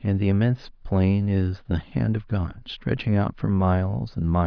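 Speech, with no technical faults.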